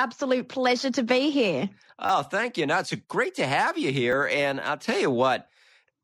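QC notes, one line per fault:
2.06–2.09 s, repeated buffer: after "pleasure to be here", a 10 ms slice plays three extra times before "thank you", giving a brief buzzy stutter with hard joins; fresh audio arrived late, losing roughly 30 ms.
4.12 s, repeated buffer: just after "great to have you", one 10 ms piece repeats once, heard as a single click because the device replayed its last buffer while waiting.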